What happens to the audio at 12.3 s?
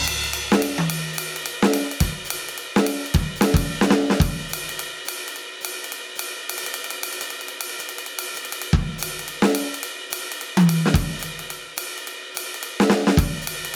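At 12.3 s the music is caught in gain pumping that runs through the whole clip. The likely cause is input gain set far too high, with a fast limiter or compressor clamping the level down on every loud attack. Each strong hit pulls the whole mix down by around 5 dB, leaving the sound breathing audibly and squashed flat in dynamics.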